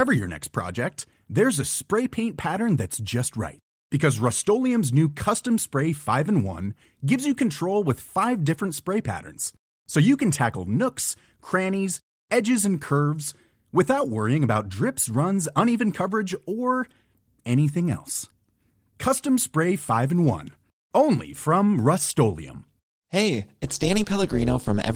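Right after "only from rustolium hey", at 23.63 s, an overlap-add ripple kicks in and runs to the end of the speech. The frames were windowed and stitched back together with an overlap that doesn't sum to a steady gain, so the level pumps by about 11 dB once per frame, around 200 times a second. You hear it as a metallic buzz with extra tones around the voice, distinct from the light damage the Opus compression leaves.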